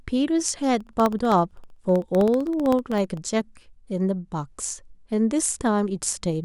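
From 0.74 s to 3.17 s the speech carries a steady train of ticks, one every 0.064 s, around forty in all, heard only where there is signal. These are periodic USB or driver dropouts: something stalls the USB link or the audio driver at a fixed interval, and each stall drops well under a millisecond of audio, replaced by silence. The abrupt gap in the waveform is what clicks.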